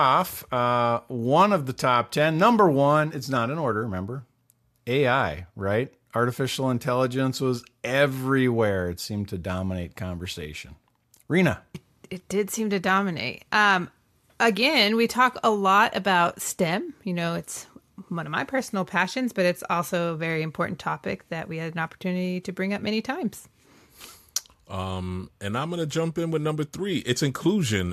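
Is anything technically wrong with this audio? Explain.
No, nothing technically wrong can be heard in this speech recording. Nothing in it points to a problem with how it was captured, processed or played back.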